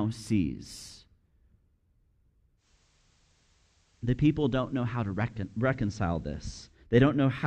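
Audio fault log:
2.57–6.79 s, digital radio blending to analogue: a 119 ms cross-fade to FM brings faint hiss, about 1 dB quieter, then blends back.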